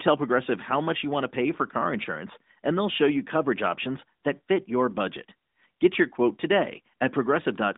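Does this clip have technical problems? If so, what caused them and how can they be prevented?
No, the speech carries the band-limiting of an AMR narrowband mobile codec path, with a line band of roughly 200 Hz to 3.7 kHz and nothing above 3.8 kHz, which is normal for such a link and needs no prevention.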